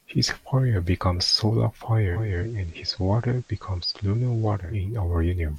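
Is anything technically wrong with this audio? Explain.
Yes. From 2.02 s to 4.87 s the receiver shows digital radio blending to analogue: the digital stream dropped out and the set cross-faded, over about 390 ms, to the FM broadcast of the same station, then back. The level falls by about 2 dB, and a faint hiss, roughly 35 dB below the speech, sits underneath until the digital signal returns.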